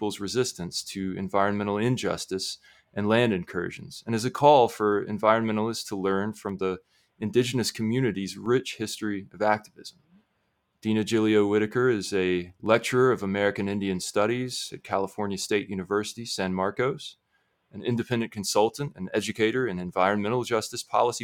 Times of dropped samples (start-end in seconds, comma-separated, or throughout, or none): 6.49, 8.46